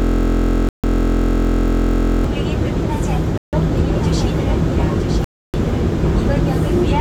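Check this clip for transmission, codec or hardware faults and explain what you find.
Three kinds of fault are present: a system hang loop at the start, three dropouts that point to a Bluetooth stall, and a doubled audio track in the second half.

From the very start until 2.24 s, a system hang loop is already under way. One 23.22 ms slice repeats exactly, 89 times, at 43.1 Hz, which fits a 1024-sample buffer. The machine stalled while the sound hardware kept replaying the same ring buffer. A slice that short is heard as a steady buzz rather than a stutter. On a waveform it shows as an identical tile copied end to end, and on a spectrogram as harmonic lines spaced 43.1 Hz apart.

At 0.69–0.84 s (149 ms), 3.38–3.53 s (152 ms) and 5.24–5.54 s (295 ms), the sound cuts to dead silence and then resumes. The likely cause is a Bluetooth stall, where interference delays packets until the headphones' buffer runs empty and playback waits for the resends. 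The first gap falls inside the buzzing loop. Each gap appears as a flat line in the waveform and a clean vertical blank band across all frequencies on a spectrogram.

From 3.95 s to the end, a second full-band copy of the audio runs about a second behind the original and about 5 dB quieter. The likely cause is a doubled audio track, with the same signal mixed in twice through a slower path or an out-of-step edit. It has no decay or room colouring and starts abruptly. On a spectrogram every event reappears as a fainter duplicate shifted right by about one second.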